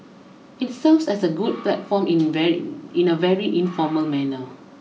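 A speech recording with no technical faults to report. There is nothing here that needs a time, a value or a cause.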